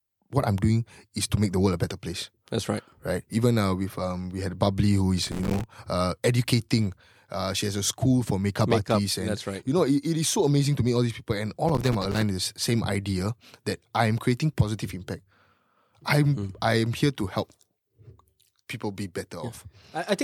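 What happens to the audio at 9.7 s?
Nothing goes wrong at 9.7 s: the speech plays through that moment without a dropout, click, glitch or other fault.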